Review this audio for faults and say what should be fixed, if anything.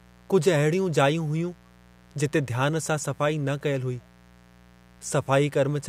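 Mains buzz throughout: a raspy 60 Hz buzz about 30 dB under the speech, from switching spikes twice per cycle spreading harmonics into the kHz range. To prevent it, use shielded, properly grounded cabling and keep the recording chain away from dimmers and rectifier power supplies.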